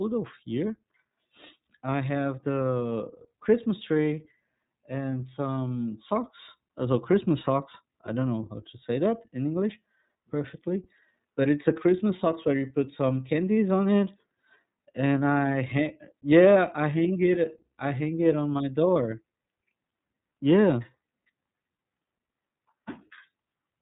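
It's a speech clip run through the iLBC codec for its whole length, and the codec damage is plainly audible. Nothing gets through above about 3.8 kHz, so the top end is gone and everything sounds narrowband and a bit boxy. Each frame's excitation is coded on its own. The frames sound like 30 ms ones, which fits a rate around 13.33 kbps, and that's what gives the voice its slightly rough, synthetic edge.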